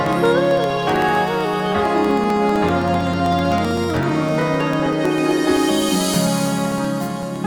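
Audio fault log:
0.06–7.36 s periodic USB or driver dropouts: every 64 ms a stalled driver silences roughly a millisecond of audio, causing evenly spaced ticks.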